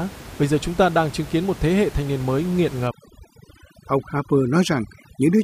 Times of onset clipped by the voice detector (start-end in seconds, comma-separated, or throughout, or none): none